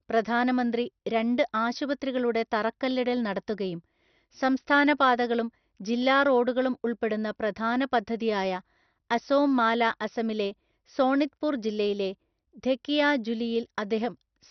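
Throughout, the speech is dull, with nothing above 6.2 kHz and a gurgling, granular distortion, likely heavy MP2 compression, consistent with roughly 48 kbps.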